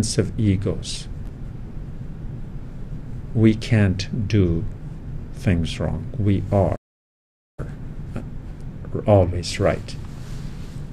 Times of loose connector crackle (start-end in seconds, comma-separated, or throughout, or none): none